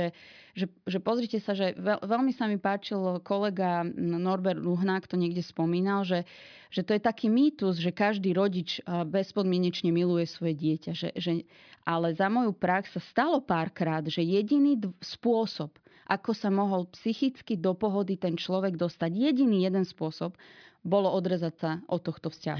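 No technical faults can be heard anywhere in the recording, and the signal stays steady and intact throughout.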